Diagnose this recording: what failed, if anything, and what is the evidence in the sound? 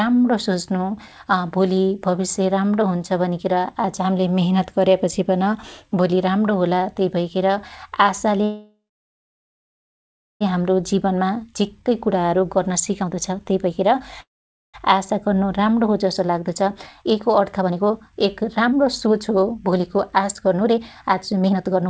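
The stage is the network feeding the call's jitter buffer. There are two call audio freezes. From 8.44 to 10.43 s the last sound trails into a fading buzz or hiss, then about 1.6 s of silence. From 14.21 to 14.76 s a shorter tail leads into roughly 0.48 s of silence. After each one the speech picks up exactly where it stopped, with nothing lost. Only delay was added: about 2.0 s, then 0.53 s. The likely cause is delayed packets leaving the jitter buffer empty.

The jitter buffer speed-up belongs to the same stage and follows each freeze. From 10.82 to 14.00 s the speech runs at 116% with its pitch unchanged. That trims roughly half a second. From 14.94 s to the end it runs at 120%, trimming around 1.5 s. It sounds hurried. The buffer was overfull after the late packets arrived together. It cut out short pitch-period pieces, one after another, to pull the delay back down. The band stops at 8 kHz, which fits the G.722 call codec.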